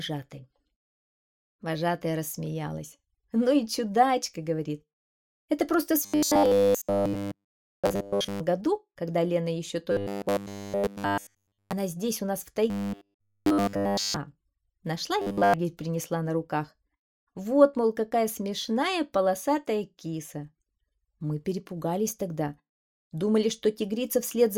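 A rigid, metallic buzz pitched at 100 Hz is heard from 6.04 to 8.41 s, again from 9.92 to 11.73 s, from 12.70 to 14.16 s, and briefly from 15.22 to 15.54 s, tracking the original only loosely. This is robotic sound from repeated short buffers, likely caused by audio arriving too seldom, so that all of each stretch is made of repeated 10 ms slices replayed while the real material is skipped.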